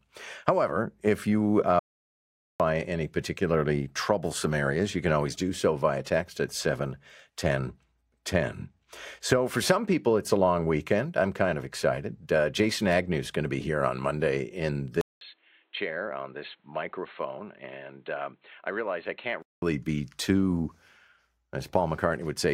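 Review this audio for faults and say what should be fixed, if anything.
At 1.79 s the speech cuts off abruptly and the track falls to dead silence, with no room tone at all, until it resumes at 2.60 s. That is an audio dropout to silence lasting about 0.81 s, and whatever was said in that span is gone. The likely cause is the input being lost briefly while the recorder kept writing silence. Check cable and wireless connections and any mute controls before recording.

From 15.01 s the sound turns dull and boxy after a gap of about 200 ms. Everything above 4.2 kHz disappears, the level drops noticeably, and a new, faint noise floor sits well below the speech. Full quality returns at 19.62 s. This points to the input being switched to a poorer device, likely a headset call profile or a fallback microphone, for those 4.6 s. Lock the recording input to the intended microphone and disable automatic device switching.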